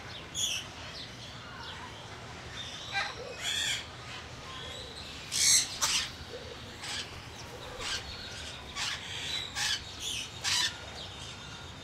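Everyday sound recording, no technical faults detected anywhere in the clip.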